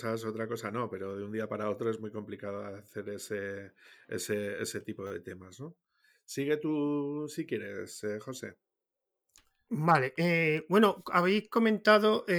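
At 2.57 s, between "para otro es muy" and "hacer ese ese tipo", there is a repeated buffer. Fresh audio arrived late, so the device played its last block again. One tiny slice sounds twice with a hard join. It is heard as a click. At 5.07 to 5.11 s, just before "de temas", the same fault returns. This time the slice repeats four extra times, giving a brief buzz. The short period fits a 10 ms buffer. Little or no audio is lost.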